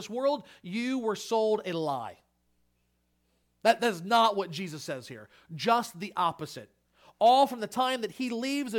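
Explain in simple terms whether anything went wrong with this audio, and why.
Nothing went wrong with this recording of speech. No technical fault can be heard anywhere in it.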